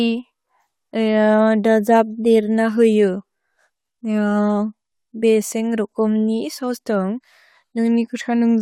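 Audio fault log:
No audible faults anywhere in this speech recording.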